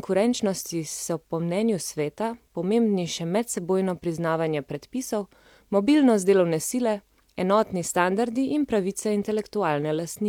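No technical faults can be heard anywhere in this recording.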